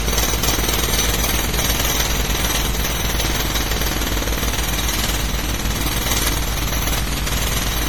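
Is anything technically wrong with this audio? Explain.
Yes, there are two problems. Throughout the clip the sound is swirly, smeared and hollow, with blurred attacks and a watery texture that is worse than a single low-bitrate encode would give. The likely cause is generation loss: the audio has probably been through an MP3 encoder at around 64 kbit/s about seven times over. Each pass quantises again on a shifted frame grid, so the noise and spectral holes build up. The content still reaches up to about 20.8 kHz.

There are also brief clicks or stutters at 1.62 s, 3.63 s and 5.64 s, spaced two seconds apart. These come from overlapping chunks. The audio was handled in 2-second blocks, and each block begins about 6.5 ms before the previous one finished. That short slice plays twice at every join, and the doubled fragment is heard as a tick or hiccup at each boundary.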